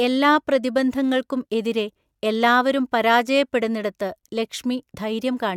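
Listening to this speech recording, nothing stood out as a technical problem at any point.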